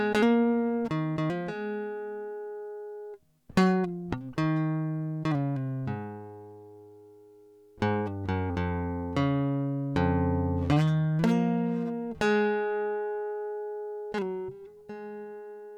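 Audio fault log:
No fault is heard in this music clip.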